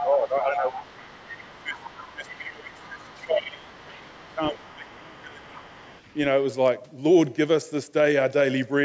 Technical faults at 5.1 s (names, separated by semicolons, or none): speech suppressed in double talk; other side's voice leaking through